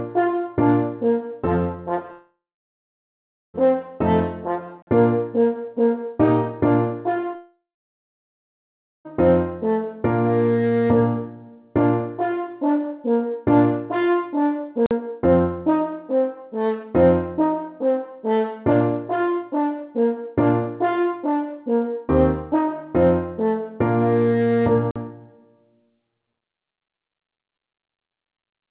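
From 2.12 to 3.56 s the sound smears into a fading buzz, then drops to about 1.2 s of silence and resumes with a stretch missing, likely a long network dropout. At 4.82 to 4.87 s a hard-edged 48 ms hole is a gap between chunks: silence inserted where two 10 s chunks join, with nothing lost. What is likely the same kind of dropout returns from 7.36 to 9.07 s, fading to about 1.4 s of silence. Identical chunk gaps follow at 14.86 to 14.91 s and 24.91 to 24.96 s.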